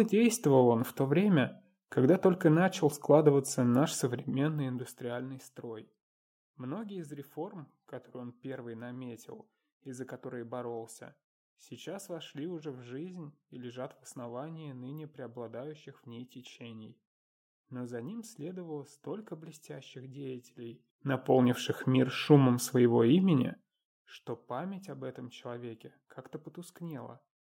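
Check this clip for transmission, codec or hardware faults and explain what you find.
No transmission, codec or hardware fault can be heard anywhere in the clip. The level rises and falls smoothly, like a fader being moved, and those changes carry through without any break or jump.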